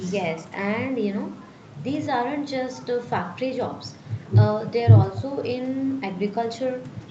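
Speech with no technical fault to report. Its content stops at about 8 kHz, which fits the normal bandwidth of a working call path.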